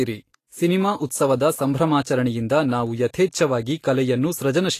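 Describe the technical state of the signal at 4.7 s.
At 4.7 s the speech is hissy and grainy throughout, with nothing above 14.2 kHz. This is likely Vorbis compression at a low bitrate, roughly 36 kbps, coarsely quantising the treble into noise.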